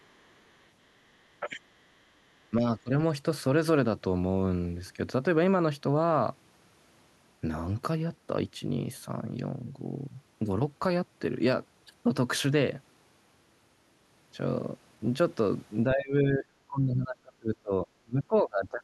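Other side's voice leaking through appears from 0.0 to 0.68 s and again from 1.81 to 1.89 s in this speech clip: a faint second voice, roughly 40 dB under the talker, likely because the echo canceller left residual loudspeaker playback in the microphone signal. Speech suppressed in double talk follows at 1.40 to 1.59 s, 2.50 to 2.67 s, 2.84 to 2.91 s, and from 15.94 s to the end. The talker's level dips by roughly 5, 10 and 20 dB in the short spots and by about 30 dB across the final three seconds, likely because the echo canceller confused overlapping talk with echo and attenuated both.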